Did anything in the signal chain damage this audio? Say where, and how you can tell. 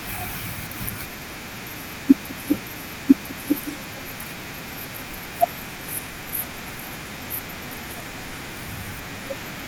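Yes. A stream segment is repeated at 2.53 s: the speech jumps back, and the same second of audio plays again until 3.53 s, adding 1.0 s to the running time. A small blip marks the jump where the repeated material joins the stream. The damage happens at the streaming playback stage. The player fetched or queued the same chunk twice and rendered both copies in sequence, so the programme replays instead of moving forward.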